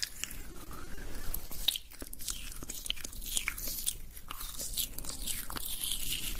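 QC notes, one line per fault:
0.41–1.51 s, repeated packet loss (robotic sound): over about 1.1 s the stream keeps dropping out in seven short holes, the longest 30 ms. Most of the lost time is bridged by extending the preceding sound, about 140 ms in total, while roughly 60 ms is simply absent. Around 13% of the stretch is concealed, and the closely spaced patches give a choppy, robotic texture with small pieces missing.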